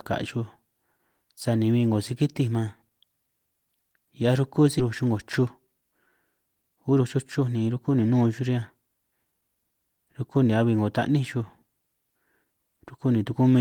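Right around 4.79 to 4.81 s there's a skip ahead: about a second of speech just isn't there, and the audio jumps straight into "chuj 'ngo" with no gap. That's a stretch of audio dropped, either on the way or by the jitter buffer, so playback can catch up.

Right after "chuj 'ngo", from 5.39 to 5.82 s, a jitter buffer speed-up kicks in at 110%, trimming maybe 50 ms. Then from 6.41 to 9.72 s, up to "rukú ni", it runs at 113% and cuts around 400 ms. The buffer is snipping out tiny pitch-period slices to shrink its delay, so the speech sounds rushed while the pitch stays the same.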